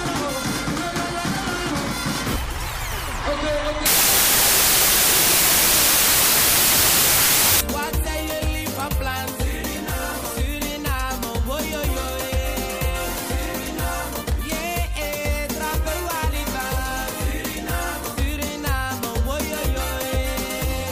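From 3.86 to 7.61 s a wrong sample width fault turns the audio into loud, harsh noise with the original sound faintly buried inside it, running about 1.33 times too fast and pitched up to match. The pattern fits packed 24-bit samples read as 32-bit, so most values straddle neighbouring samples. Unlike a plain sample-rate error, which only shifts speed and pitch cleanly, this one buries the signal under broadband noise.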